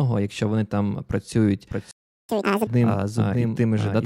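Right after "якщо вони там працюють", at 1.71 s, a doubled audio track kicks in: a second copy sits around 0.7 s behind, about 5 dB quieter, with no room tail. It's likely a slower capture path feeding the same audio in again, and it runs to the end. At 1.91 s there's a playback stall, with dead silence for about 0.38 s until 2.29 s, likely the player running dry or its thread getting blocked. Then from 2.29 to 2.67 s comes catch-up at higher speed: the backlog plays at 2x, pitched up roughly ten semitones, before settling back to normal.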